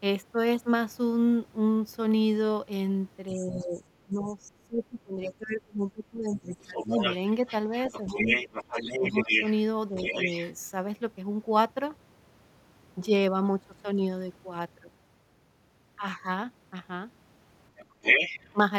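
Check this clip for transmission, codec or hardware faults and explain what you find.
Echo-control problems are present in three forms, all tied to a loudspeaker echo canceller struggling with the far end of a call.

Other side's voice leaking through, at 3.29 to 4.33 s, 5.8 to 10.53 s and 17.76 to 18.53 s: a second voice sits under the talker, faint at about 20 dB below the speech at first, then about 5 dB below, and finally about 5 dB louder than it. The likely cause is residual echo the canceller failed to subtract.

Speech suppressed in double talk, at 3.32 to 6.99 s, 7.7 to 8.17 s, 8.99 to 9.35 s and 9.89 to 10.25 s: the talker's level dips while the second voice is present, by about 20 dB over roughly three seconds in the first stretch, and then by about 5 to 10 dB in brief dips. This is likely the canceller muting both voices when it could not tell them apart.

Background gated by the echo canceller, at 17.85 to 18.02 s: the room sound dips by about 12 dB for a brief moment while the loudspeaker signal plays, then returns. 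The canceller clamped the microphone hard and released it once the loudspeaker signal was handled.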